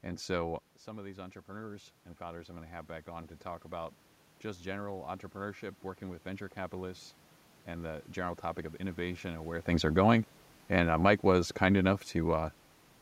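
From 0.85 to 7.08 s, automatic gain rising: after the talker moves away around 0.5 s and the level drops by about 12 dB, the gain control slowly adds about 8 dB. Room noise swells along with the voice, which sets it apart from a talker moving. It settles just before "and the general topic".

From 9.71 to 12.48 s, right after "of innovation and where", automatic gain falling: the talker moves near 9.5 s. The control then eases the gain down by about 3 dB, and the voice and background sink together rather than the voice alone.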